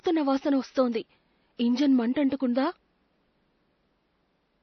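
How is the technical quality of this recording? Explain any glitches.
The recording has heavy codec damage across its whole length. The room noise sits about 47 dB below the speech.

MP3 compression, throughout the clip: the sound is watery and swirly, with attacks smeared, which fits a likely MP3 encode at a low bitrate around 32 kbps. Short of bits, the encoder discards weak frequency lines, so those components flicker on and off from frame to frame.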